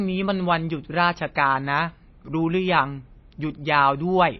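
Throughout the speech, nothing is heard above 5.8 kHz, and weak detail swirls watery. This is likely MP3 compression at a low bitrate, starving and zeroing frequency lines.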